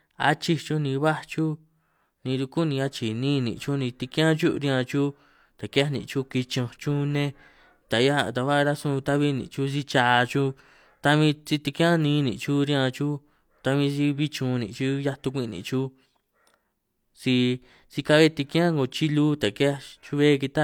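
No technical faults are audible.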